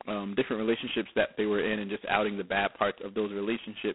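G.726 ADPCM coding runs through the whole clip at 16 kbit/s, leaving just two bits per sample to describe prediction error, so the speech carries a heavy, rasping hiss tracking its level. The band is telephone-narrow, 200 Hz to 3.4 kHz, with nothing above 3.9 kHz.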